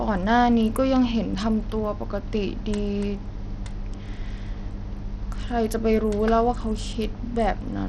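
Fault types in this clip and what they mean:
Bluetooth SBC compression: throughout the speech the treble flickers and drops away under a gritty grain, likely from SBC starving upper sub-bands at a low bitrate near 80 kbps.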